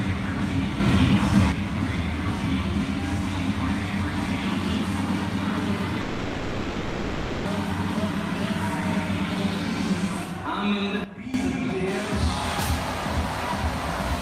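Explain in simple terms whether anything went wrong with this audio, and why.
A couple of things went wrong. There are two sudden gain jumps: at 0.8 s everything, background included, abruptly gets louder until 1.52 s, and at 11.04 s it drops sharply quieter until 11.34 s. The likely cause is a volume setting applied instantly rather than smoothly.

From 6.01 s to 7.47 s there's a long network dropout, likely from audio going missing in transit. About 1.4 seconds of the real sound is lost, and the player fills the whole gap by stretching out the last bit it had, so you hear a smeared buzz or hiss instead.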